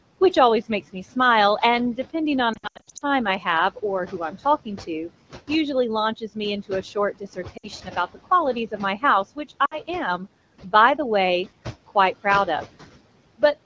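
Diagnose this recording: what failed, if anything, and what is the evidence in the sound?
Throughout the recording the background pumps: it drops away in the pauses and swells back under the speech. These are noise suppressor artifacts from the call-processing stage. The suppressor pulls down every band it judges to be steady noise, frame by frame, here by about 17 dB. The room noise it is working against sits only about 17 dB below the speech.

From 2.53 to 3.02 s the speech stutters, with brief drops to near silence and a weak, rough recovery. The same happens briefly at 7.57 to 7.68 s and 9.65 to 9.78 s. These are lost AMR speech frames, a network-to-codec fault. Radio errors corrupted frames, so the AMR-WB decoder repeated the last good pitch and vocal-tract settings with falling gain. The first event loses about 300 ms scattered over 480 ms, with an 80 ms longest gap. The later two lose 60 ms each.

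Parts of the speech sound swallowed, as if consonants and word endings were turned down with the background, between 3.76 and 5.1 s, 6.17 and 8.17 s, and 8.71 and 9.51 s. This is speech cut by the noise suppressor, again in call processing. It mistook low-level speech energy for noise and attenuated it, by up to about 11, 15 and 13 dB respectively. The damaged portions total only a fraction of a second in each span, around 150 to 300 ms.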